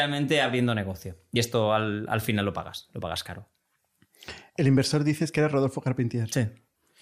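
At 1.36 s, compressed frames are skipped: about one frame of the compressed audio, which fits a 32 ms frame size, was never played, either because it was missing from the file or because the decoder rejected it as damaged. The speech jumps ahead by roughly 30 ms at that point. On a waveform, the envelope changes abruptly at the join. On a spectrogram, the harmonic tracks break off and resume shifted, with a thin vertical seam marking the splice.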